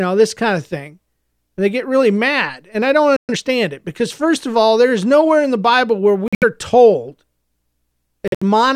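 A speech clip with three kinds of fault. After "mad and I don't" the sound cuts out at 3.16 s and returns at 3.29 s, about 120 ms of silence. This is likely a playback stall. Right after, from 3.29 to 3.41 s, the audio runs at double speed before "it because first of". That is time-compressed catch-up: the player drops small pieces to clear its backlog, so pitch holds while the sound is hurried. Two abrupt holes follow, at 6.28 to 6.44 s and 8.28 to 8.43 s. Each is about 150 ms, which fits six lost frames. These are corrupt frames muted: the decoder rejected damaged data and silence replaced it, with timing kept.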